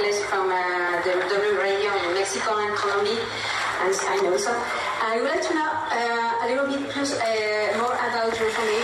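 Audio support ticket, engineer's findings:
No fault found in this audio; nothing to report for this ticket.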